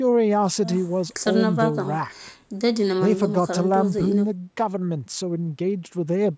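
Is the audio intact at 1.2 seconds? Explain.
Yes, the speech at 1.2 seconds is intact, with nothing wrong at that moment beyond the normal bass trimming and the 8 kHz upper limit of call microphone processing.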